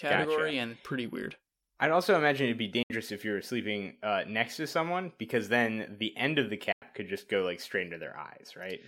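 A speech clip with two Bluetooth dropouts. The sound falls silent from 2.83 to 2.91 s, after "also imagine it'd be", and from 6.72 to 6.82 s, after "the end of the". It then resumes further along, likely because late wireless packets were discarded, about 70 ms and 90 ms of audio.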